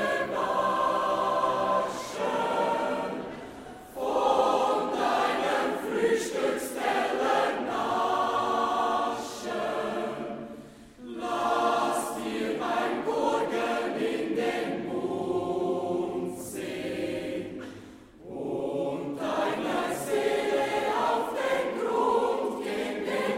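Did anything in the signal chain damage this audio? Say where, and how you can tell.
No, no signal-chain damage heard.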